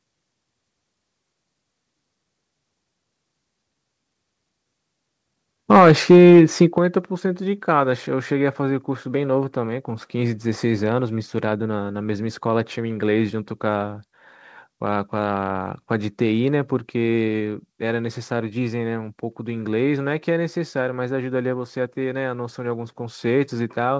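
Microphone overload from 5.71 to 6.62 s: peaks driven about 6 dB past the converter's limit lose their tops, giving the loudest syllables a harsh crackle, likely from excessive input gain. Microphone volume stepped down at 5.77 s by about 2 dB, then at 6.78 s by about 8 dB. Voice and background drop abruptly together, likely the call software cutting input gain after clipping. Through this the band stops near 8 kHz, consistent with G.722 at 64 kbps.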